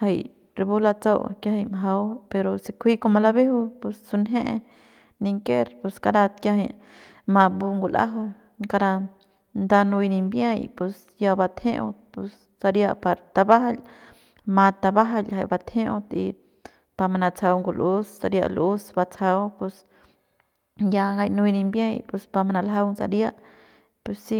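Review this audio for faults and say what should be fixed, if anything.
Nothing needs fixing; no faults turned up in this recording.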